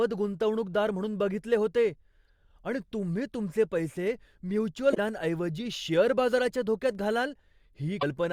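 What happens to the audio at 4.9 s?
At 4.91 s the speech hits damaged data in the compressed stream, lasting until 4.98 s. The decoder misreads the corrupted frames, loses sync and hunts for the next valid frame header. It comes out as a brief glitch in the speech.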